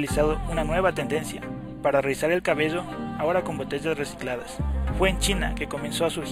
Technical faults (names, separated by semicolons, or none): channel delay (comb filtering)